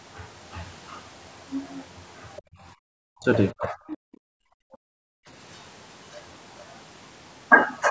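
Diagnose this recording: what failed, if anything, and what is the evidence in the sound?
The trouble is all in the call processing stage, specifically the echo canceller. From 2.36 to 2.42 s there's a brief scrap of a second, faint voice, sitting roughly 25 dB under the main talker. That's the other side's voice leaking through, likely far-end audio from the loudspeaker that got back into the microphone because the canceller didn't fully remove it. It's short, but it's a different source.

Right after that, from 2.42 to 2.78 s, the room background drops out by about 28 dB for around a third of a second, then comes back. It happens again from 5.11 to 5.27 s, this time about 40 dB deep. That's background gated by the echo canceller. The suppressor decides loudspeaker echo is present and clamps the mic gain hard, so the room tone vanishes and returns once it releases.

In between, the main talker's own level collapses in three spots: 3.06 to 3.28 s, 3.52 to 4.23 s (the longest, roughly 0.7 s), and 4.67 to 4.83 s, with drops of around 40 dB. 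That pattern is speech suppressed in double talk. The likely cause is that both ends were talking at once and the canceller couldn't separate near-end speech from echo, so it attenuated everything and turned the talker down.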